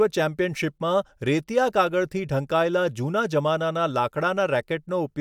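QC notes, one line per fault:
No faults found in this speech recording. Nothing here calls for a QC flag.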